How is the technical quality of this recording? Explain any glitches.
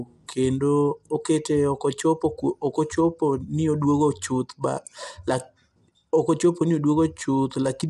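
The technical quality is compromised throughout by plainly audible codec damage. Low-delay AAC compression, likely AAC-ELD at a rate that fits about 32 kbps: short frames smear the voice's harmonics into grainy noise, and nothing sounds above 11.6 kHz. Unlike simple low-pass filtering, the roughness sits between harmonics.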